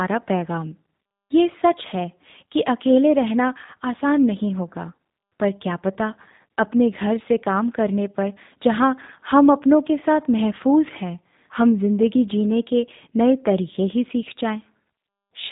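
From start to finish the speech carries G.729 codec damage: nothing passes above about 3.8 kHz, and low-rate parametric rebuilding, consistent with 8 kbit/s, leaves it plainly rough and synthetic.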